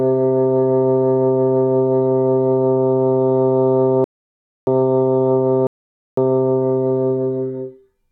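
At 4.04 s and again at 5.67 s, rebuffering stalls halt playback for about 0.63 s and 0.50 s. Unlike dropouts, the sound resumes exactly where it froze, so time is added rather than lost.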